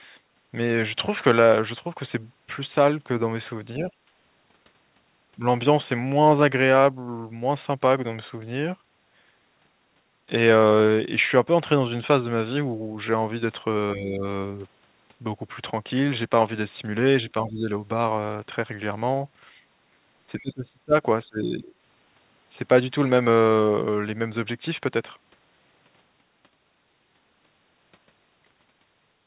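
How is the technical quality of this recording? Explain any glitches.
The speech drops in level five times. It runs through a narrowband call path with nothing above 4 kHz, which points to G.711 A-law at 64 kbps.

The speech is suppressed in double talk at 3.78–3.9 s, 13.94–14.25 s, 17.33–17.69 s, 20.41–20.94 s and 21.25–21.72 s. The voice briefly sinks, lightly at first and then more deeply, with the dip at 20.41 s nearly cutting it out. The likely cause is an echo canceller that, with both parties talking, couldn't tell the near voice from loudspeaker echo and attenuated everything.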